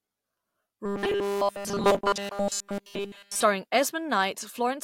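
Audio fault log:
0.86–3.43 s, robotic sound from repeated short buffers: the speech collapses into a rigid, metallic 200 Hz buzz that still roughly tracks the syllables. It's likely caused by starved input, with essentially every stretch filled by looping a tiny chunk, which fits a buffer of about 5 ms.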